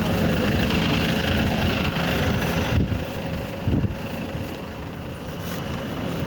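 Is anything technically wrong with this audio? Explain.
Yes. Gain pumping runs through the whole clip. Quiet parts swell up in the gaps, then duck by around 5 dB under each loud sound. The likely cause is input gain set far too high, with a fast limiter clamping every peak. Levels sound squashed.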